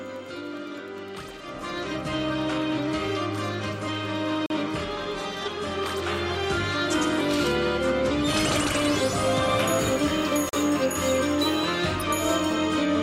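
The audio has a gap between stream segments: hard-edged silences of about 40 ms at 4.46 s and 10.49 s, six seconds apart, where segment timestamps leave holes without losing audio.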